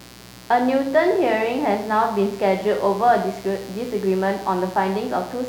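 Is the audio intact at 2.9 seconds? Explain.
No, at 2.9 seconds the speech has mains buzz, a steady raspy 60 Hz hum running the whole clip, made of sharp switching spikes whose harmonics climb into the kilohertz range.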